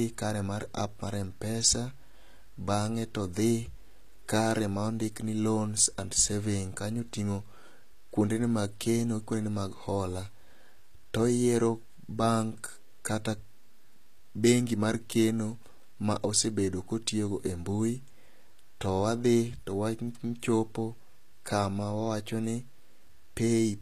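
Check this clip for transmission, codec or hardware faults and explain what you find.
One codec fault runs through the whole speech clip. It sounds like HE-AAC compression, likely at a low bitrate around 24 kbps. The treble is rebuilt from copied lower bands, so s sounds turn gritty and metallic. Nothing is present above 14.9 kHz.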